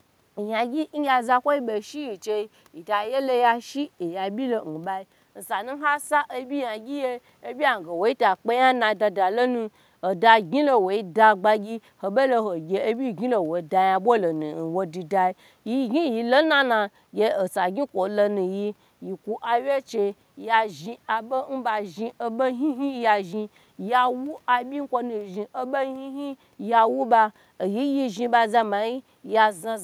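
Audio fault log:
No faults detected anywhere in this speech recording.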